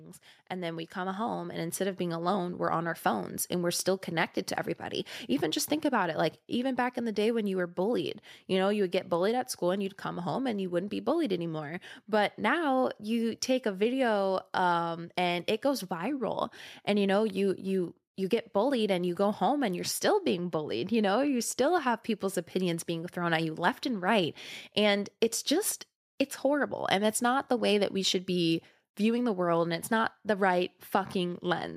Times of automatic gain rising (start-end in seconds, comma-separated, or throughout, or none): 0.49-3.09